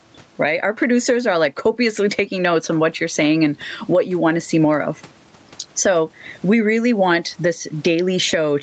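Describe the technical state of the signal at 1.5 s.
At 1.5 s the gain swings roughly 15 dB, bringing loud and soft parts closer in level and squashing the dynamics. This gain pumping runs throughout the clip, likely from input gain set far too high with a fast limiter clamping each peak.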